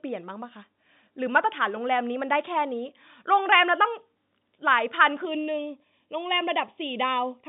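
One channel arrives a fraction of a millisecond late and is summed to mono, causing channel delay (comb filtering) in this telephone-band speech from 5.25 s to the end at 7.48 s. Evenly spaced cancellations begin around 1.5 kHz, leaving the sound hollow and phasey.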